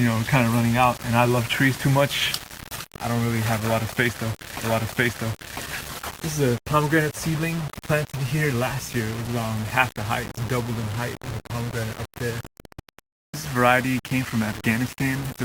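From start to finish there's a grainy, gritty distortion riding on the sound, and it changes shape as the level moves. The quiet stretches get rough and sputtery, with the faintest bits dropping out to nothing. That's the signature of low bit depth without dither, likely from rounding to something around 6 bits with no noise added first, leaving the error only around 15 dB below the signal.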